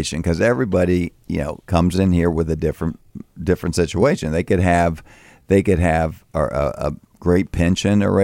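No technical faults can be heard in the speech here. Nothing in the recording calls for a time marker or a diagnosis.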